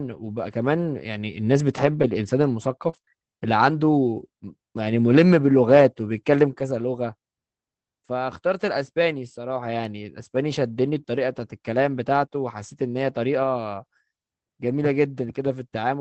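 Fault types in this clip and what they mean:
Scattered short gaps: Between 1.77 and 3.09 s, about three small holes appear where packets arrived too late or not at all. The receiver bridged each one by extending the sound just before it. About 80 ms went missing and the repair spans about 140 ms, with the longest single gap around 40 ms, covering about 7% of that stretch. It comes across as a few quick ticks or hiccups.
Short concealed packet loss: At 11.01 to 11.04 s, about 20 ms of audio never reached the decoder in time, and about 13 ms of that hole was papered over by stretching the preceding speech. Because the patch continues what was already there, it's heard as a tiny smear or wobble rather than silence. The speech just around that moment sounds briefly blurred before it blends back into the real signal.
Lost packet rebuilt from error correction: At 14.70 to 14.72 s, what sounds like a single lost packet was replaced using the low-bitrate backup copy that Opus tucks into the next packet. 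There's no gap, just a 20 ms slice that's grainier and noisier than its surroundings. The call is band-limited to 8 kHz with this codec, so the rebuilt bit shows as roughness rather than a loss of top end.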